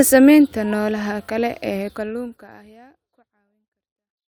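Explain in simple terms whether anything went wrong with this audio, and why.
Nothing went wrong with this speech recording. From around 2 seconds the level eases gently down to silence at the very end, a smooth fade-out like an editor would add, with no click or abrupt cut.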